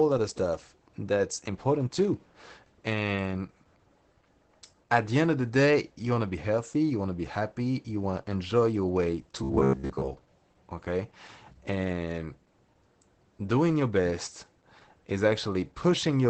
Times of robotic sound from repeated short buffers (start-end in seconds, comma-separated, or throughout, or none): 9.43-10.21